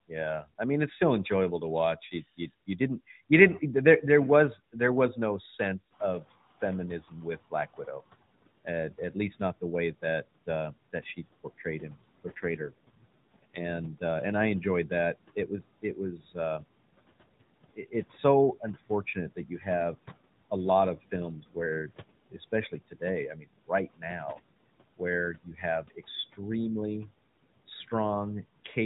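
From 0.08 to 5.17 s the noise suppressor mistakes parts of the speech for noise. This speech cut by the noise suppressor turns soft consonants and word endings down by up to about 18 dB, for roughly a third of a second in total, so they sound swallowed.

Near 6 s the room noise jumps by about 17 dB, and the noise suppressor is catching up. From 5.9 to 6.45 s its noise estimate lags, so the noise leaks through before sinking by about 14 dB over 550 ms.

From 6.21 to 16.65 s the suppressor clips speech again, by up to about 18 dB and for roughly 0.7 s in total. Within that span, from 12.26 to 13.67 s, an AMR rate drop cuts the codec's bitrate. The narrow band continues without a gap, but the voice turns rougher and more synthetic, which fits a fall from 12.2 to 5.9 kbps.

Further suppressor cuts follow from 17.76 to 19.66 s, by up to about 16 dB. From 20.97 to 28.76 s, after "a lot", they reach about 19 dB and total around a second, leaving endings faint.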